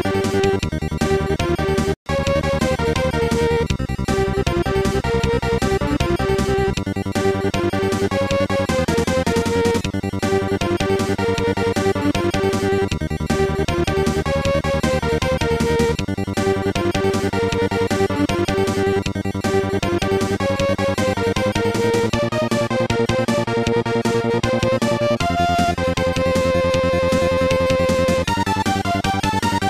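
At 1.94 s the sound cuts out abruptly and falls silent for about 120 ms, resuming at 2.06 s. This is a playback stall: the player likely ran out of buffered data or had its output thread blocked, so nothing reached the output until it recovered.

From 2.06 s to 3.26 s the audio is hurried along at roughly 1.1 times normal speed with its pitch unchanged. This is time-compressed catch-up, where the player trims its backlog by removing small slices and cross-fading across the joins.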